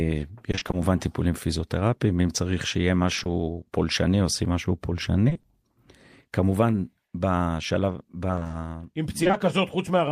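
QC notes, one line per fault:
0.51–0.75 s, 3.15–3.27 s, 5.29–5.45 s, 8.31–9.35 s, repeated packet loss (robotic sound): audio kept dropping in holes of up to 20 ms, each patched by stretching the preceding sound. The first three stretches are about half patched, the last about a sixth, giving choppy speech with pieces missing.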